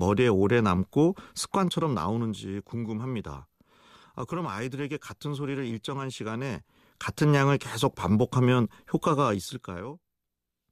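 Zipper noise appears twice, from 1.44 to 2.53 s and from 9.22 to 9.97 s. In both places the gain control lowers the level in coarse, unsmoothed steps, about a hundred a second, instead of gliding. Each jump leaves a tiny discontinuity in the waveform. The first drop is about 10 dB and the second about 20 dB. While the speech fades, the steps add a fast, gritty ticking, like a zip being pulled.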